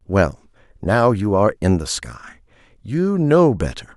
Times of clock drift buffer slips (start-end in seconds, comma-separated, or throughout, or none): none